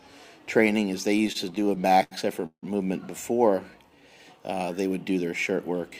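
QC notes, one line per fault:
1.17–2.64 s, repeated stutter stalls: late packets emptied the buffer 19 times. The last sound was continued to fill 432 ms, longest 163 ms. Nothing lost, but it drags.
3.71–4.01 s, jitter buffer slow-down: the buffer ran low or had just raised its target delay, so pitch periods were repeated, adding 64 ms. It plays at 82% speed, same pitch, drawn out.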